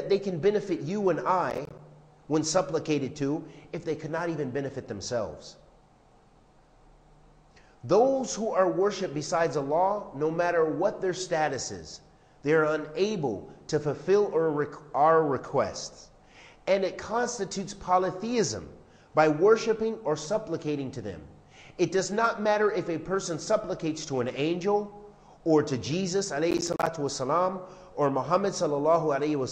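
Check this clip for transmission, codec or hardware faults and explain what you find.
There's one problem here, processor overload crackle, in two bursts: 1.50 to 1.79 s and 26.51 to 26.87 s. The processor kept missing its deadlines for what sounds like buffers of around 10 ms, about 10 times in the first burst and about 15 in the second. Each miss drops a hard-edged sliver of silence, and together they make a gritty, tearing crackle over the audio until the load eases.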